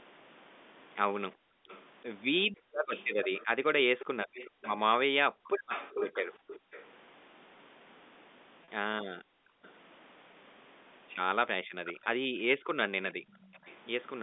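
From 1.35 to 6.72 s the background is gated by the echo canceller: the room sound drops by about 40 dB, adding up to roughly a second and a half. This happens because the canceller clamps the microphone while the far end plays. Unlike a dropout, the speech stays present and only the ambience vanishes and returns.

Overlapping this, from 1.69 to 6.84 s, a delayed copy of the speech trails by 374 ms at about 10 dB below it. This is likely an echo leak, with loudspeaker sound slipping past the canceller and being sent back. It differs from reverberation in its distinct fixed lag.

At 2.52 s a 20 ms packet loss with pitch repetition gives a tiny buzzy hold, where the receiver repeated the last pitch cycle. The longer 40 ms loss at 8.64 to 8.68 s fades briefly before the speech cross-fades back, which distinguishes it from a hard click or gap.

From 9.17 to 9.63 s gating returns for about half a second. 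A short echo scrap follows at 9.64 to 9.69 s, 416 ms late and about 30 dB down.

From 11.63 to 13.34 s the background gates again for under a second in total. Echo at 416 ms and about 20 dB down runs from 11.84 to 13.75 s. Another single-packet repetition at 12.04 to 12.06 s adds a short buzzy hold.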